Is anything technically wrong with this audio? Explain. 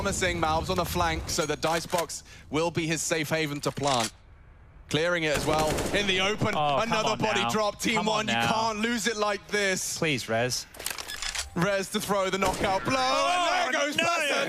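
Yes, there's a recurring loud pop. Double pops land at 0.78–0.88 s, 5.54–5.61 s and 6.53–6.72 s, with a single one at 11.62–11.64 s. They sit roughly 10 to 20 dB above the audio, which carries on underneath. The cause is likely a brief voltage spike from a connector, a switch or a driver glitch.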